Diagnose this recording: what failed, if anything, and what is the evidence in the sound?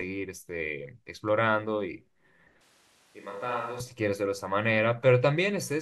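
From 2.61 s to 3.80 s the speech abruptly turns roomy and hollow, thinner in the bass and roughly 10 dB quieter, with background noise rising to sit only about 30 dB under the speech. It snaps back just as suddenly. That points to a likely switch to a distant microphone at the capture stage: the close microphone's feed dropped out and a farther pickup took over, hearing more room reflection and ambient noise.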